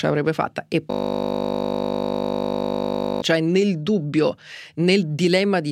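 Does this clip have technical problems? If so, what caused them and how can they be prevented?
Yes. From 0.91 to 3.22 s the speech is replaced by a steady buzz. This is a system hang loop. The computer or its audio driver stalled, but the sound hardware kept replaying the same stretch of its ring buffer. Each loop lasts 20 ms, so the piece repeats over a hundred times. That rapid repetition fuses into a 50 Hz buzz. It points to a buffer of about 20 ms. Keeping drivers current and avoiding heavy system load during recording can prevent such stalls.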